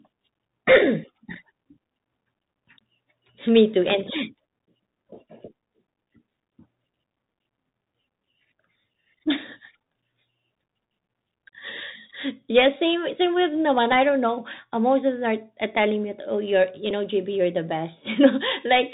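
From the start, the speech passes through a Bluetooth CVSD headset codec. Nothing above 4 kHz survives. Sibilants turn scratchy, and a granular hiss sits underneath throughout.

At 16.90 s comes a Bluetooth headset packet repeat. About 7.5 ms of audio was lost, which points to two dropped packets. The previous packet's data replays, giving a brief buzz near 267 Hz.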